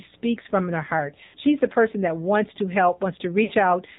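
From the start the speech is boxed in and thin, with a buzzy, synthetic edge and nothing audible above 4 kHz. That is the AMR narrowband mobile codec at work: it samples at 8 kHz and rebuilds the voice from a vocal-tract model driven by a few pulses per 5 ms subframe. The plainly audible coarseness fits one of the lower AMR-NB modes, around 7.4 kbps.

From 1.24 to 1.37 s the sound smears into a drawn-out, fading tone that drops almost to silence before the voice returns weak and rough. These are lost AMR speech frames. Frames failed their checksum, so the decoder kept repeating the last good pitch and vocal-tract settings with falling gain. The gap of about 100 ms fits five lost frames. A shorter dropout from 3.44 to 3.52 s is drawn out and fades in the same way, which fits about three lost frames.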